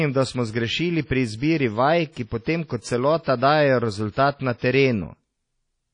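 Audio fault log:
throughout: WMA compression. The sound is likely coded by a WMA transform encoder at a low bitrate, around 32 kbps, with nothing above 10.1 kHz. Its long blocks smear quantisation noise into a washy, ringing hiss that rises and falls with the speech.
2.12 s to 2.16 s (just before "ki potem kot"), 3.23 s to 3.26 s (just after "vaj ki potem kot"), 4.11 s to 4.17 s, 4.58 s to 4.62 s: pre-echo. Noise sized for a sharp onset fills its block, so a short hiss of 33 to 54 ms leads each attack and blurs it.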